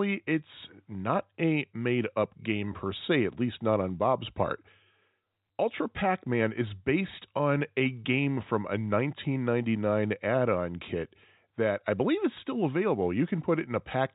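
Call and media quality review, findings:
Nothing to flag here: the speech arrives through a call path with nothing above 4 kHz, which fits a narrowband G.711-style codec, and there's no fault to log.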